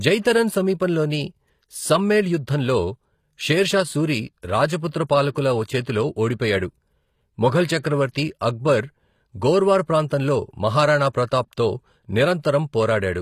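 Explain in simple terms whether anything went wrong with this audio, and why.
Something did go wrong: the s sounds and the airy top of the speech come across gritty and lisping, and it stays that way the whole way through. That's likely HE-AAC compression, which keeps only the lower sound and fakes the treble by copying it upward.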